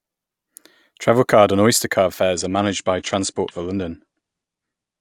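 Adaptive stream at a lower bitrate from 2.34 s to the end of this speech clip: the quality drops suddenly with no gap, as the stream switches to a leaner encoding, which fits a move from about 96 to 32 kbit/s AAC. Above that point nothing remains beyond 9.8 kHz, so the treble dulls and codec artefacts thicken.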